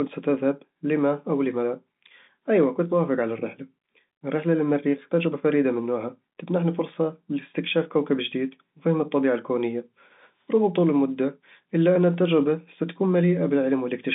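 Speech over G.711 telephone coding, band-limited to roughly 150 Hz to 3.7 kHz with nothing above 3.8 kHz as that path implies, and no technical faults to report.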